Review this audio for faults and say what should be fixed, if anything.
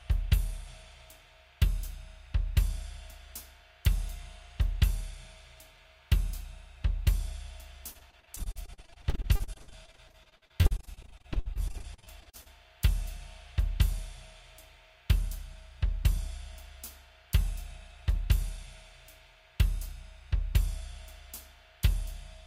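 From 7.91 to 12.48 s there's a stretch of repeated packet loss (robotic sound): dozens of short holes, the longest about 59 ms, each patched by stretching out the sound just before it. About a third of that span is concealment, around 1.5 s filled in, and the next hole keeps arriving before the last patch settles. That's why it turns choppy. Worth fixing with a bigger jitter buffer and some forward error correction on a less congested link.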